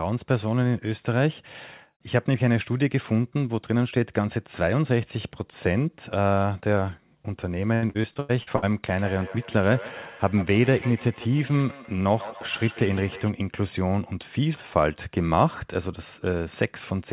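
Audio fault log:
7.74–8.64 s, repeated packet loss (robotic sound): seven short gaps, the longest 93 ms, are patched by extending the preceding sound, covering about 39% of the span with choppy fill.
8.89–13.33 s, feedback echo between two devices: speech returns at an interval of roughly 150 ms, peaking about 15 dB below the direct speech, as one device's playback re-enters another's microphone.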